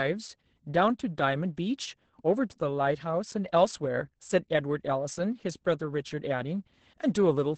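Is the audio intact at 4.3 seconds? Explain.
No. At 4.3 seconds the speech sounds muffled, hoarse and slightly robotic, with nothing above 8.7 kHz, from Opus voice compression throughout, which fits SILK coding near 10 kbps.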